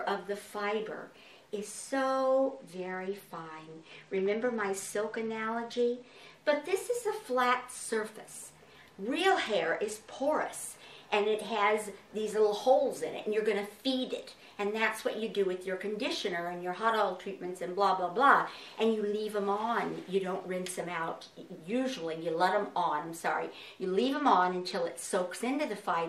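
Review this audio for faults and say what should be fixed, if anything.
From 2.45 to 6.34 s, 9.29 to 10.44 s and 23.97 to 24.87 s the treble dulls and a gritty noise rises, then clears. This is a Bluetooth SBC bit pool drop: under link congestion the encoder cut its bit budget, which fits a fall from bit pool 28 to 12, near 96 kbps, starving the upper sub-bands and coarsening quantisation elsewhere. To prevent it, reduce 2.4 GHz interference and keep the devices close so the link holds its full bit pool.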